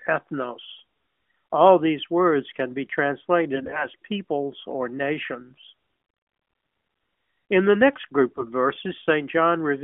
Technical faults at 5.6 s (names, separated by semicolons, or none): AMR bit errors